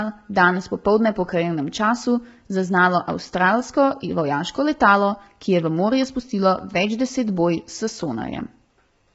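Throughout, the speech sounds rough and grainy, with noise filling the gaps between harmonics and nothing above about 7.8 kHz. This is heavy low-delay AAC compression, likely AAC-ELD, whose short frames resolve pitch poorly at a bitrate that fits about 16 kbps.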